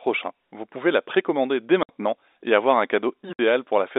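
At 1.83 s and again at 3.33 s the speech drops out abruptly for 60 ms. This is packet loss filled with silence: stretches of the stream never arrived, and the receiver played nothing in their place, cutting hard edges into the waveform. Each 60 ms hole fits two consecutive 30 ms packets going missing. Around the gaps, the G.711 telephone coding keeps the sound inside the narrow 300 to 3,700 Hz line band.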